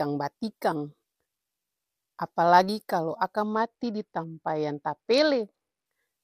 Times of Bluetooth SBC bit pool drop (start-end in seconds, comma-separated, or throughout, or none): 3.54-5.86